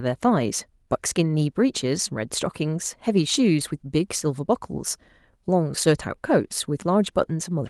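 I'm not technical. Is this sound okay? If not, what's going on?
Yes, there's nothing wrong to hear here, so you can relax.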